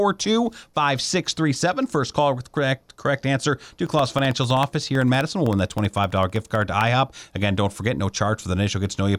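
Just after "correct correct answer to", from 3.87 to 6.87 s, the speech carries periodic USB or driver dropouts: every 64 ms something stalls the audio path and a sliver of signal, well under a millisecond, is replaced by silence. The result is a steady buzz of ticks, about 16 per second, heard only while there is speech. On a waveform these appear as evenly spaced tiny notches; a spectrogram shows thin vertical broadband lines at regular intervals.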